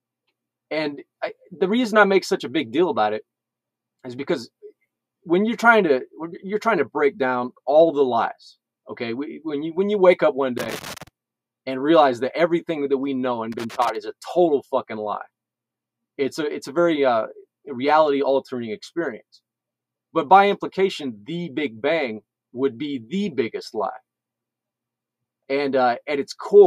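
The audio has two bursts of loose connector crackle, from 10.58 to 11.08 s and from 13.52 to 13.95 s. A worn contact is making and breaking, chopping the signal into irregular scratchy pops. On a waveform these show as jagged gaps and spikes, and on a spectrogram as scattered broadband vertical streaks.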